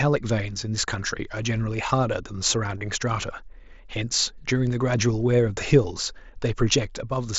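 Voice packets from the headset were dropped and the receiver filled each gap by repeating the best-matching recent stretch of waveform. This is concealed Bluetooth headset packet loss. At 2.78 to 2.81 s, a 30 ms run brings a brief buzzy, level-held tone and a slight warble as real audio resumes. At 5.83 s, a single 7.5 ms loss is almost hidden.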